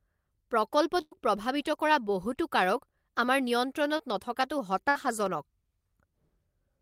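Speech, marred by gaps, a smear and two clicks. A burst of packet loss hits at 1.01 to 1.13 s and again at 4.89 to 4.97 s. About 100 ms, then 60 ms, never arrive. The last sound is held and fades, then the speech jumps ahead. A short concealed packet loss at 3.97 to 4.01 s leaves a brief smear where about 20 ms is patched over. Sharp single clicks sound at 4.41 s and 5.26 s. Their likely cause is dropped samples, a tiny fraction of a millisecond cut from the waveform.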